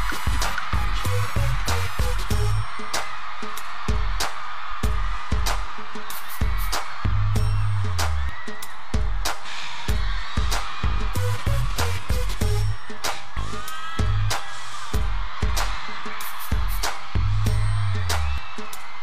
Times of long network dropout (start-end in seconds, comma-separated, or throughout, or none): none